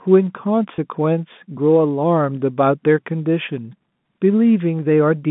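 At 0.76 to 0.78 s the speech briefly holds on a slightly buzzy, frozen note before carrying on. This is packet loss with pitch repetition: about 20 ms of audio went missing, which fits a single lost packet, and the receiver bridged the gap by repeating the last pitch period, heard through the narrow G.711 telephone band.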